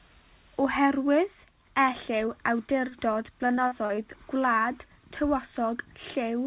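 A speech recording heard through a narrowband call path, with nothing above 4 kHz, which fits telephone-grade coding such as G.711 A-law. From 2.26 to 2.29 s there is a brief smear. This is short concealed packet loss: about 20 ms of audio never reached the decoder in time. The receiver patched roughly 12 ms of the hole by extending the preceding sound before blending back into the real signal. A longer disturbance runs from 2.89 to 3.99 s, where the speech turns choppy, with fragments missing. That stretch is repeated packet loss. Seven separate gaps, the longest about 43 ms, each had to be filled by continuing the last sound before the next dropout arrived. About 17 percent of that second-long span is synthetic fill rather than received audio.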